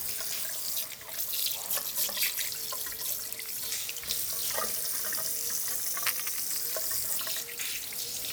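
A recording of sounds with two stretches where speed and pitch move together. From 1.54 to 3.77 s everything slows by about 6% and drops roughly a semitone (about 107 cents), then snaps back; from 5.71 to 6.50 s it runs about 6% fast and rises a semitone (about 100 cents). That's likely a drift correction step, where clock-matching software jumped the playback rate to refill or drain its buffer.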